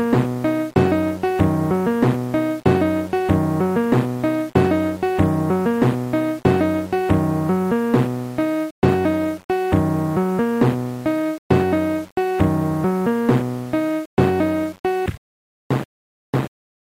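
Throughout the audio, a grainy error tracks the signal about 30 dB below it. The likely cause is low bit depth without dither, which fits 7-bit rounding. A waveform shows coarse steps in quieter stretches, and a spectrogram shows broadband noise rising and falling with the sound.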